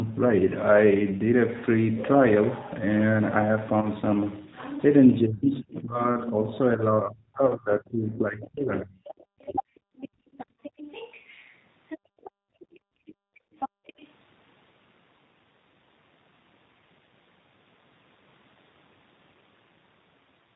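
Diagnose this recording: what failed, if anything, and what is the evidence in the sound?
The speech sounds rough, slightly synthetic and muffled throughout, with nothing above 4 kHz. That fits the G.729 codec, likely G.729A at 8 kbit/s. It rebuilds each 10 ms frame from a vocal tract filter, a pitch predictor and a few pulses, so fine detail and the upper band are lost.

At 3.81–3.90 s, 5.34–5.45 s and 7.46–7.55 s, the sound smears into a fading buzzy tone and stays weak briefly afterwards. This is VoIP packet loss concealed by the speech codec, covering gaps of 20, 80 and 40 ms. The decoder extrapolates its last pitch and filter while ramping the gain down, and the following frames take time to recover.

The talker's level sags from 5.23 to 6.25 s, about 20 dB at worst over roughly a second. It sags again from 6.76 to 9.61 s, dipping about 35 dB over roughly two seconds. This is likely speech suppressed in double talk: the echo canceller, unable to separate local speech from loudspeaker echo, turns both down.

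A faint second voice sits under the main speech at 8.78–9.13 s and 9.45–13.14 s, roughly 25 and 20 dB down. It is louder at 13.59–14.09 s, about 10 dB down. This points to the other side's voice leaking through, where the echo canceller likely left some of the loudspeaker signal in the microphone feed.

The room background drops away from 9.88 to 10.62 s, by about 24 dB for about half a second. It drops again from 11.98 to 13.86 s, by about 33 dB for about a second and a half, before returning. This is background gated by the echo canceller, which clamped the microphone hard while the loudspeaker played.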